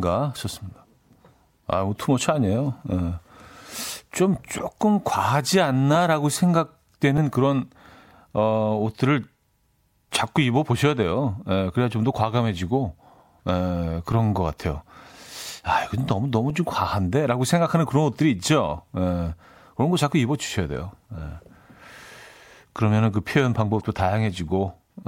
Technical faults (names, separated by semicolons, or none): damaged data in a compressed stream